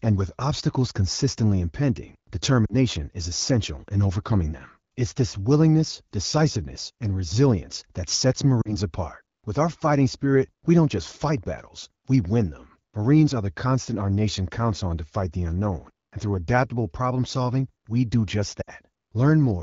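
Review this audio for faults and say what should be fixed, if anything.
You've got lost AMR speech frames in three spots: 2.65 to 2.75 s, 8.61 to 8.76 s, and 18.62 to 18.70 s. Radio errors broke the frame checksums, so the decoder filled in by repeating the last good pitch and vocal tract settings at falling gain. In wideband that drops toward near silence within a couple of frames. The first two gaps sound like about two 20 ms frames, and the last like three. The speech returns a bit weak or rough right after. The AMR-WB codec itself sounds clear, which fits the 12.65 kbit/s mode. To prevent this, fix the radio link quality or add stronger error protection so fewer frames arrive corrupted.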